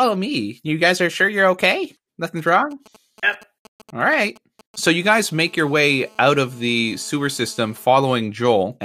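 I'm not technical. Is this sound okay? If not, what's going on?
No. Two kinds of interference from a nearby 2G mobile phone can be heard.

From 2.39 s to 5.07 s, just after "are sure you're okay", there are GSM signalling bursts: a galloping dit-dit-dit of short buzzes pitched at about 217 Hz. This is what a 2G phone sends while it exchanges brief control messages with the network, such as before a call or a text arrives. The recording equipment picks up those radio pulses and turns them into sound.

From 5.07 s to 7.85 s, this becomes GSM phone buzz: a hard, raspy, steady buzz, again at about 217 Hz, with many overtones. Here the phone is in a call and sends bursts of radio energy 217 times a second. The audio circuit converts each burst into a click, and the rapid run of clicks is heard as a continuous buzz that has nothing to do with the speech.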